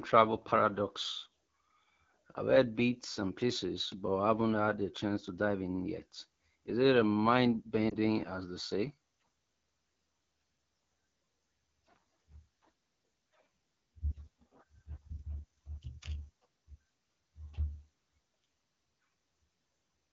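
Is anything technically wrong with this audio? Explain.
Yes, there are two problems. Throughout, the speech sounds rough and raspy. This is plainly audible damage from the AMR wideband (HD Voice) codec running at 8.85 kbit/s, one of its lowest rates. Too few bits reach the pulse-driven vocal tract model, and the band above 6.4 kHz is only filled with shaped noise.

From 7.89 to 7.95 s there is a brief dip and warble in the speech. This is a lost AMR speech frame: the decoder repeated the last good pitch and vocal tract settings at reduced gain. The sound points to a single 20 ms frame failing its checksum.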